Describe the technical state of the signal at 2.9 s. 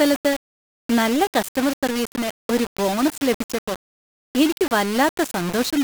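At 2.9 s the speech carries the same gritty, grainy distortion heard across the whole clip, likely low bit depth without dither. Rounding to 4 bits leaves error only about 10 dB below the signal. Because that error follows the speech, quiet passages sputter or fall silent instead of sitting under a steady hiss.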